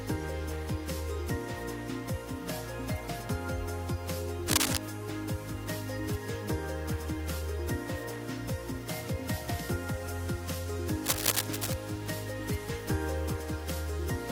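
Cable scratch noise appears from 4.48 to 4.78 s, about 5 dB louder than the sound, and again from 11.03 to 11.74 s at about the same level as the sound: dense, ragged rustling bursts, likely from a worn cable or connector being moved so its contact resistance fluctuated rapidly.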